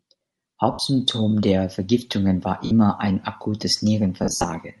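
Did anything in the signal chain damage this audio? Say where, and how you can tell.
Yes. At the codec stage, the speech carries a plainly audible breathy, grainy edge across the entire clip. The upper band sounds hollowed out and refilled with noise rather than carrying real detail. This is likely Bluetooth LC3 compression, the LE Audio transform codec, at a rate that fits roughly a 48 kbps stream with 10 ms frames. At that rate the encoder zeroes much of the high spectrum and the decoder fills it with noise.

On the radio link there are lost LE Audio frames at three points: 0.72 to 0.79 s (70 ms), 2.65 to 2.71 s (60 ms), and 4.24 to 4.44 s. In the last stretch 160 ms is missing in pieces across about 200 ms, with the longest unbroken gap around 70 ms. In each gap the decoder repeats the last spectrum with randomised signs. The sound turns into a noisy smear, and the longer runs begin fading toward silence.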